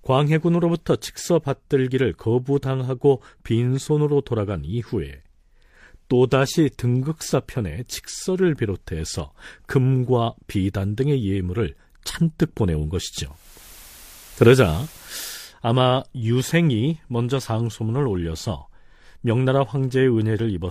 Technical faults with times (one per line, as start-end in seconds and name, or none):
13.25-15.51 digital radio blending to analogue